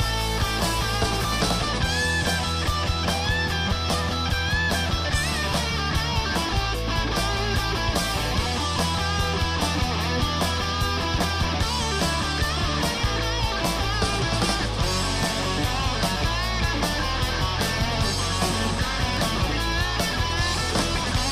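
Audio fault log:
18.10 to 19.79 s, train of clicks: for just under two seconds a run of sharp, near-identical pulses ticks over the audio at about 8.9 per second, unevenly spaced, roughly fifteen in all, with peaks standing around ten dB above the surrounding sound. Because each pulse is short and sharply edged, it reads as popping laid on top of the material. The source is likely electrical interference or a faulty connection or power supply.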